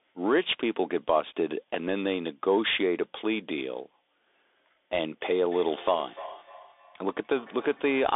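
Throughout, Bluetooth CVSD headset codec damage cuts everything above 3.8 kHz. S sounds turn scratchy over a granular hiss, unlike the clean dullness of simple band-limiting.

From 5.2 s to the end, feedback echo between two devices brings each word back about a third of a second later. The repeats are thin and ringing, about 21 dB below the speech, and arrive as discrete returns rather than a smooth reverberant tail.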